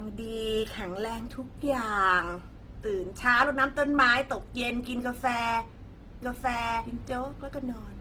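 The whole speech clip sounds like low-bitrate audio saved at a high bitrate. The smeared, watery artefacts suggest a very low-bitrate first pass, likely later re-encoded as a roomy MP3. At 6.22 s a doubled audio track jumps in abruptly, likely a second copy about as loud running roughly a second behind, and it continues to the end.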